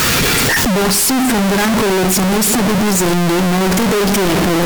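From the first moment to the end, the speech arrives as a near-square, very loud and harsh signal sitting at an almost fixed, high level, with background noise as prominent as the talker, though pitch survives. This is float read as integer: the samples were likely written as 32-bit float and read as 32-bit integer, so sign and exponent bits dictate level. Unlike ordinary clipping, quiet passages and pauses are just as loud.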